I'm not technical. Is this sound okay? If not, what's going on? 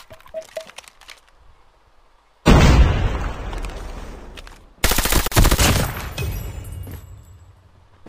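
No. At 5.28 to 5.32 seconds there is a gap at a join of encoded pieces: the sound breaks for about 41 milliseconds, then picks up exactly where it left off. The file was built from separately compressed pieces, and each piece carried a little built-in silence that nobody trimmed before joining them. Unlike a dropout, where part of the sound goes missing, nothing is lost or skipped here. There is only an extra pause pushed in between.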